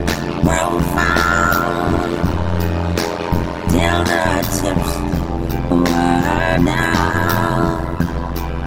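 Throughout, overlap-add ripple: frames recombine without summing to constant gain, so the level dips by about 60 dB roughly a hundred times per second, a metallic buzz. Next, DAB burbling: bit errors escape correction into the MP2 data, jolting single sub-bands, heard as short blips of noise at 4.05–4.14 s, 5.69–5.74 s and 8.29–8.35 s.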